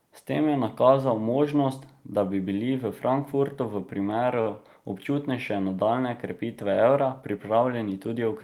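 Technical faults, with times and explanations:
4.41 to 4.48 s, short stall from a late packet: Right after "v primeru", the sound hangs for a moment. A packet arrived late and the jitter buffer ran dry. The receiver filled the gap by stretching the last bit of speech for about 45 ms. When the packet came in, playback resumed from the same point. Nothing is lost. Instead, one sound is held too long, with a faint buzz or dip. Everything after this point plays 45 ms later than before.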